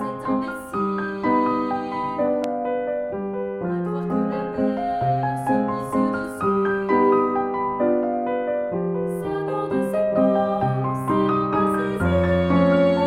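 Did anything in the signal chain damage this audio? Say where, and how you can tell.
Yes, a single loud pop from 2.44 to 2.46 s rises to roughly 10 dB above the signal, with the sound carrying on underneath. It appears as a sharp spike on the waveform and a thin broadband vertical stripe on a spectrogram, likely a voltage transient from a plug, switch or static in the analogue wiring.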